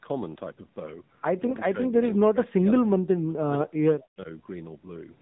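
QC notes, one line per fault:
Throughout: AMR narrowband mobile codec. Encoding at a low AMR-NB mode, consistent with about 7.4 kbps, limits the band to 8 kHz sampling and rebuilds the voice from a vocal-tract model and sparse pulses. Nothing above 4 kHz survives, and the speech has a plainly audible buzzy, synthetic edge.
1.47–2.93 s and 3.21–4.28 s: speech suppressed in double talk. The likely cause is an echo canceller that, with both ends talking, could not tell this talker from the far-end echo and attenuated everything. The voice dips for roughly a second, then roughly 0.7 s, falling by about 30 dB and about 40 dB at worst.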